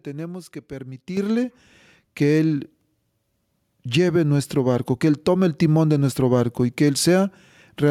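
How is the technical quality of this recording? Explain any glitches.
One glitch: at 1.17 s the microphone volume steps up by about 8 dB as software raises input gain, lifting voice and background together instantly, unlike someone leaning closer.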